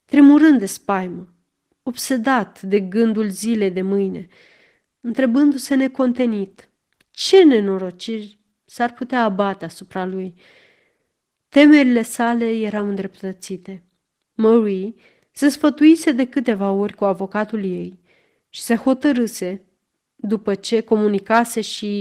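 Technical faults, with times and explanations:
Throughout, Opus voice compression: the speech carries plainly audible codec damage, with a muffled, slightly hoarse and faintly robotic quality. The sound points to Opus in hybrid mode at a low rate, around 16 kbps with 20 ms frames. The band below 8 kHz is coded by linear prediction with a coarse excitation, and a thin transform layer covers the full band above it. Too few bits reach either part for clean reconstruction.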